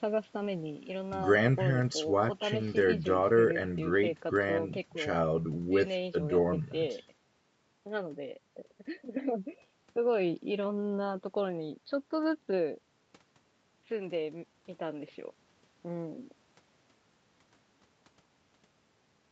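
There are no technical faults to describe in this speech, which shows only the normal bass trimming and 8 kHz upper limit of call microphone processing.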